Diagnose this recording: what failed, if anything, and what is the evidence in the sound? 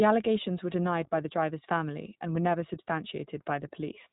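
The codec stage passed this speech through iLBC, coding each 20 ms frame independently. Throughout, nothing survives above 3.8 kHz, and plainly audible roughness fits its 15.2 kbps mode.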